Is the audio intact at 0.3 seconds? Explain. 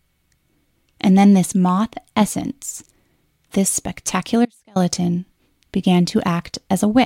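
Yes, at 0.3 seconds the audio is intact, with no dropout, click, distortion or other fault at that moment.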